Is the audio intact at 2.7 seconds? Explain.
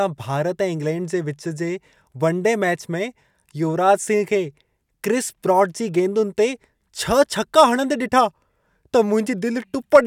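Yes, the audio is intact at 2.7 seconds, with no fault audible at that point in the speech.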